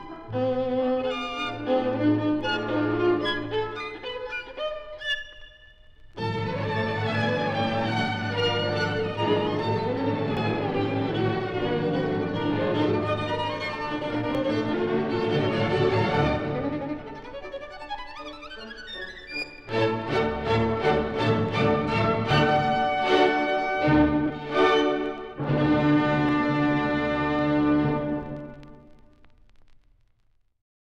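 Brief skips, each losing a tiny sliver of sound with the two sides butted together, occur at 2.41, 6.39, 10.37, 14.35, 18.33, 22.31, 26.29 and 30.27 s. The steady spacing, which fits 4-second chunks, points to likely audio missing between chunks as the recorder switched buffers.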